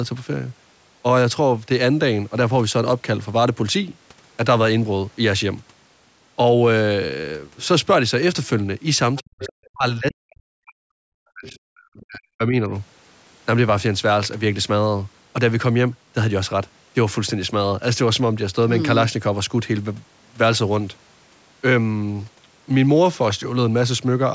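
At 9.15 to 9.22 s a faint second voice slips in underneath the speech, about 20 dB quieter than the talker, and it returns from 9.41 to 9.52 s at about 15 dB down. This is the other side's voice leaking through. The far end was likely being played on a loudspeaker, and the echo canceller did not scrub all of it from the microphone signal. What remains comes through in scraps.

Right after the first scrap, from 9.22 to 10.98 s, the talker's own speech sinks and breaks up, falling by around 40 dB at its deepest. The same thing happens again from 11.21 to 12.71 s, with roughly a second and a half of speech affected in each stretch. This is speech suppressed in double talk. Both sides were most likely talking at once, and the echo canceller could not tell the talker from the loudspeaker echo, so it turned everything down. In the second stretch a brief scrap of leaked voice, about 25 dB down, still gets through at 11.48 to 11.52 s. 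The call's microphone processing band-limits the audio to nothing above 8 kHz, which is expected for this path.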